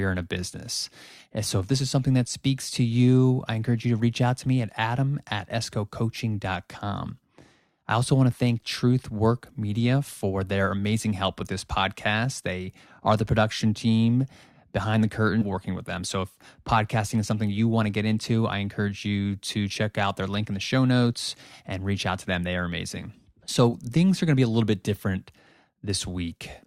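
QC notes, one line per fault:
15.41–15.44 s, stream segment skipped: right after "production team behind the" the speech lurches forward with a quick blip and picks up at "working with them", so a chunk of the programme is gone. Likely a segment failed to load and the player just moved on.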